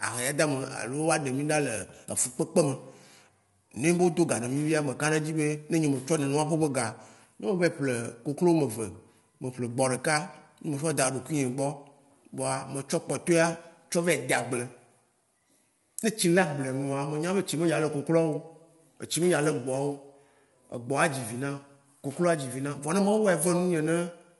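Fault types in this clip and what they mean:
Low-delay AAC compression: the speech is rough and grainy, with noise between harmonics and nothing above 11.6 kHz, likely from AAC-ELD at around 32 kbps.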